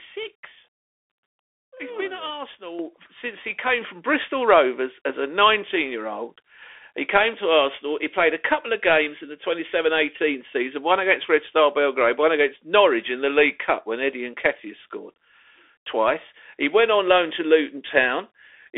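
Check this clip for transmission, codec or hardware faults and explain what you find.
Two faults are present: the whole clip comes through a Bluetooth CVSD headset codec, and the microphone volume is stepped up twice near the start.

Bluetooth CVSD headset codec, throughout. The speech is confined to a telephone band of about 300 Hz to 3.5 kHz, with nothing above 3.8 kHz. CVSD codes each sample as a single up-or-down bit with an adapting step size, which fits a 64 kbit/s link. Fast loud transients outrun the step, so sibilants turn scratchy and a grainy hiss sits under the speech. Ordinary band-limiting would leave the band clean, but here the codec damage is plainly audible.

Microphone volume stepped up, at 2.79 s and 3.81 s. The first jump, about 8 dB, lands right after "been at" and before "since he came from". The second, about 4 dB, follows "since he came". Each time the input gain on the device was raised in a single step, so speech and background noise get louder together and instantly. 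Gradual automatic gain control would ride the level smoothly instead, and a noise-floor change alone would leave the speech level unchanged.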